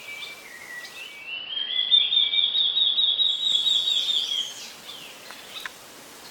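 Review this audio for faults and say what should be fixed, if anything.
Digital radio blending to analogue, 0.97 to 3.62 s: the receiver lost its digital stream and cross-faded over 389 ms to the AM broadcast, so the level drops about 2 dB, and hiss appears roughly 30 dB below the signal. Improve digital reception with a better antenna or placement, or record from a wired or streamed source, so the receiver never falls back to AM.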